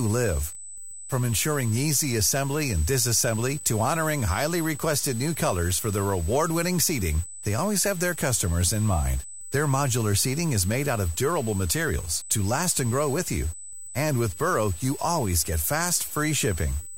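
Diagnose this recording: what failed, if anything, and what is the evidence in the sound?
A steady, fixed-pitch whine at 8 kHz sits under the speech for the whole clip, only about 15 dB below it. This is USB whine in the analogue wiring: the bus's 125-microsecond microframe current draw leaks into the audio through shared power or ground.

Grainy, gritty distortion rides on the speech throughout, roughly 20 dB below it. It changes with the signal rather than sitting as a steady hiss. The likely cause is low bit depth without dither at the sample-format conversion stage, consistent with truncation to around 6 bits.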